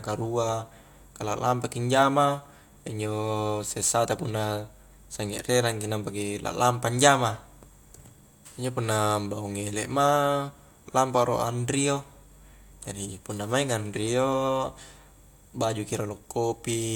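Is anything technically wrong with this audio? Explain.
No, nothing is technically wrong with this audio.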